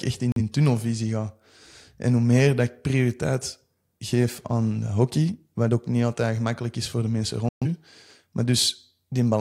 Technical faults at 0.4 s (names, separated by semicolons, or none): digital broadcast dropout